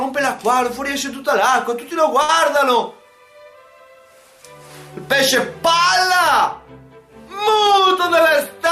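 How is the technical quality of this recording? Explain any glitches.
There is one glitch. From 2.22 to 2.30 s there is a short stall from a late packet. A packet arrived late, the jitter buffer emptied, and the receiver stretched the last sound by about 63 ms before resuming where it stopped. Nothing is lost, but the sound hangs briefly. On a spectrogram the frequency content freezes into a flat horizontal smear. The waveform shows a repetitive, looped stretch there.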